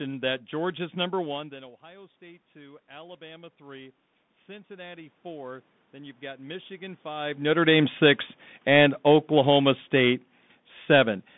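Speech squeezed through a Bluetooth CVSD headset codec from start to finish, so nothing survives above roughly 3.8 kHz and the band sits at about 150 Hz to 3.6 kHz. The damage is plainly audible: s sounds come out scratchy, loud bright bits smear where the one-bit up/down encoder can't move its step size fast enough, and there's a grainy hiss riding under everything, which fits the 64 kbps CVSD link a headset uses. Then from 7.49 s to 10.27 s there's automatic gain falling. The gain control decided the input was too hot or its background noise too strong and eased itself down by about 4 dB, so the voice and the room noise behind it sink together rather than the voice alone getting quieter. Don't confuse that with the level shifts near 1 s and 7 s, which sound like the talker moving relative to the mic.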